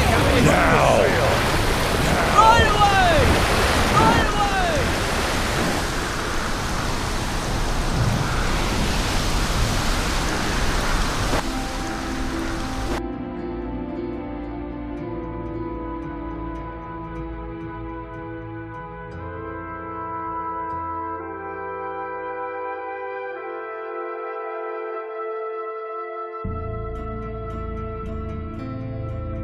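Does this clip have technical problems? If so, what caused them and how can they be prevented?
Yes: a doubled audio track runs throughout, a full-band copy trailing about one and a half seconds behind and a few dB quieter. Unlike echo, it has no decay or room colour, likely from a second capture path. Mute or remove the duplicate input route before recording.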